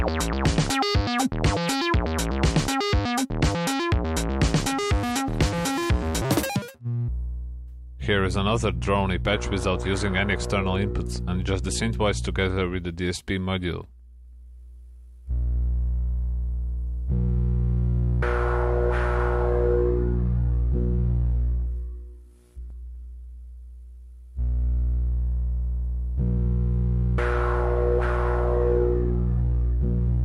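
From 6.22 to 7.08 s the sound abruptly turns high and hurried, pitched up by roughly ten semitones and racing at 1.98 times its proper pace. This is a section at the wrong speed, likely played back against a mismatched clock.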